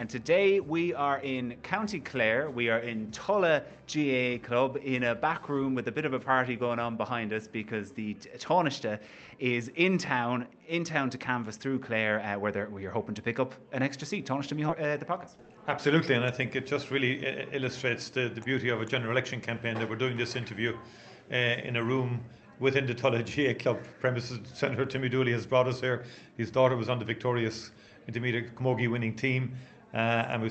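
At 14.69 s there is a skip ahead. About a second of audio is gone. It was dropped while later audio was already queued, so playback jumps forward. There is no filler. The two sides butt together almost directly.

From 15.26 to 15.79 s comes a jitter buffer speed-up. The buffer held more audio than it aims for. The receiver trimmed many tiny pitch-period slices, about 70 ms in total. The sound runs at 110 percent speed but keeps its pitch, so it feels briefly hurried.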